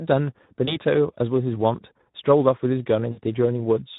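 The whole clip carries Speex codec damage: the speech sounds hoarse and noisy, which fits a low setting around 11 kbps. From 0.65 to 0.77 s, VoIP packet loss concealed by the speech codec smears the sound into a brief fade, consistent with one lost 20 ms frame, and it stays weak or distorted as the decoder recovers. The same concealment returns from 3.11 to 3.20 s, with more lost this time, pointing to about 60 ms lost.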